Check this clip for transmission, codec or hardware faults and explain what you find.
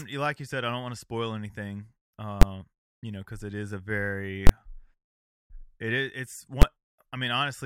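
There are invalid numbers at full scale in this speech, three times. At 2.42 s and 6.62 s you get a single hard bang, each about 12 ms long, which fits a 512-sample block. At 4.47 to 4.49 s the block is longer, about 23 ms, consistent with 1024 samples, so it's a brutal pop on the way in and out with nothing between. A calculation blew up to infinite or invalid values, and those got pinned to the maximum output level for the whole block.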